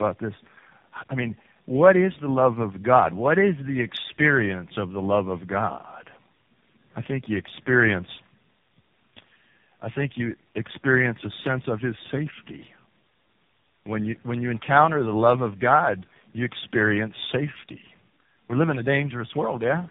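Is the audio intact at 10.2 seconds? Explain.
No, not really. At 10.2 seconds you're hearing tandem speech coding, which runs through the whole clip. The speech was decoded and re-encoded at each link, so every coder worked on the previous one's damage. It sounds like about four speech codecs in a row, ending in something like AMR-NB. The result is rough, muffled and warbly, with nothing above 3.7 kHz.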